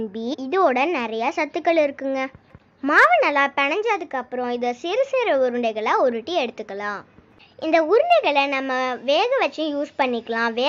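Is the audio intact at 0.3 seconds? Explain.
No. From 0.33 to 0.35 s compressed frames are skipped: roughly 150 ms, about seven frames (consistent with 23.2 ms frames), never play, so the audio jumps ahead.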